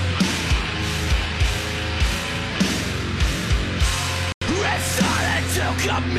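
At 4.32 s the audio drops abruptly into silence and resumes at 4.46 s, a gap of about 0.14 s. This is a corrupt frame muted: bit errors damaged the compressed data, the decoder rejected the affected frames, and the player filled their slots with silence. The hole's length points to roughly two frames lost. The onset is a hard cut rather than a fade, and because silence replaces the frames one for one, playback timing after the gap is unchanged.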